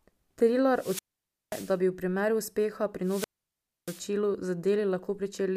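At 0.71 s the speech suffers a wireless microphone squelch dropout: the analogue FM link fades, hiss swells briefly, then the receiver's squelch mutes the output for about 0.53 s before the signal returns near 1.79 s, just before "bi v primeru uspeha". The same happens from 3.02 to 4.07 s, right after "bi v primeru uspeha", with a mute of about 0.64 s. On a spectrogram each dropout shows a broadband noise smear followed by a blank gap, and the waveform flattens to near zero.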